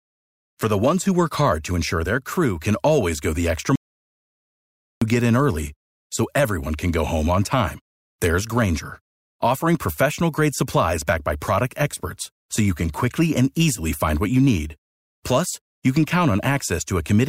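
A speech recording in which the input was likely lost for a moment, leaving the recorder writing silence: an audio dropout to silence from 3.76 to 5.02 s. After "always go the extra" the sound cuts to total silence, with no room tone, and returns on "get in early so", with about 1.26 s of speech missing.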